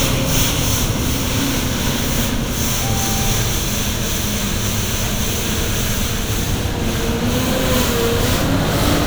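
A sudden voltage step entered the signal chain, likely from a plug, switch or static discharge, producing a single loud pop from 8.54 to 8.57 s. It lands as one sharp thump a few decibels above the surrounding level, with the sound continuing beneath it.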